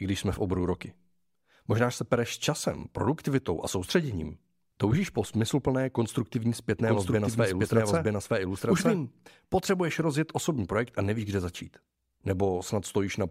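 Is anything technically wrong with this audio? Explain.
Yes. From 6.79 to 8.97 s, after "po smysluplné konstruktivní" and before "potřebuješ rozjet osobní projekt", the speech has a doubled audio track. A second full-band copy runs roughly a second behind at about the same level, likely from a slower capture path mixed back in. It sounds like two overlapping, out-of-step passages that start and stop abruptly, with no reverb tail. On a spectrogram the harmonic patterns repeat, shifted about a second right. The waveform shows summed, denser envelopes with hard edges.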